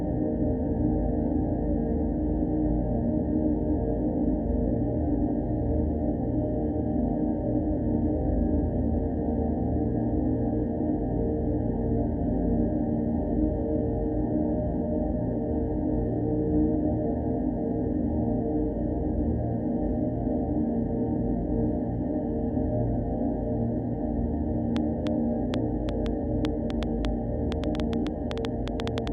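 From 24.77 s to 29.08 s, a train of clicks ticks and pops over the sound, about twenty sharp, similar pulses at roughly 5.1 per second, unevenly spaced and well above the surrounding level. They likely come from electrical interference or a faulty connection or power supply.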